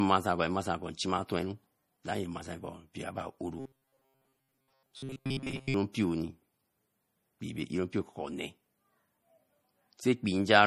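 Throughout the speech there is a plainly audible watery, swirly quality, likely MP3 compression at a bitrate around 40 kbps. From 3.60 to 5.74 s the speech turns into a rigid metallic buzz near 134 Hz, likely robotic sound from repeated short buffers. Chunks of roughly 7.5 ms replay in place of most of the real audio.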